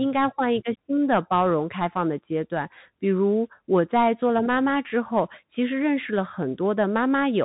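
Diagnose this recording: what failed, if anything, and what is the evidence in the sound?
The failure is at the codec stage: the whole clip has been through the Bluetooth CVSD headset codec, and the damage is plainly audible. Nothing survives above about 3.8 kHz, the s sounds come out scratchy, and there's grainy hiss under the speech. That fits a 64 kbps one-bit delta coder whose adaptive step can't keep up with loud high content.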